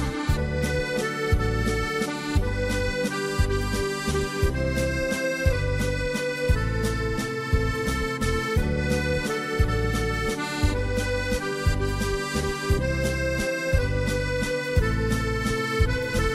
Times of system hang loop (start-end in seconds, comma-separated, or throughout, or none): none